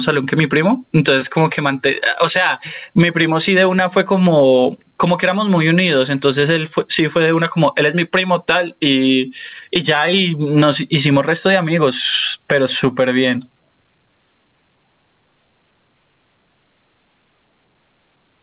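This speech recording suffers from gain pumping throughout, likely caused by input gain set far too high with a fast limiter clamping down on every loud syllable. The gain swings by around 15 dB, leaving a squashed sound over a narrowband call path that carries nothing above 4 kHz.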